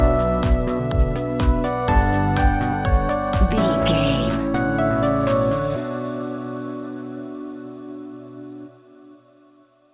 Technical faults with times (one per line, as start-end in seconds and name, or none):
none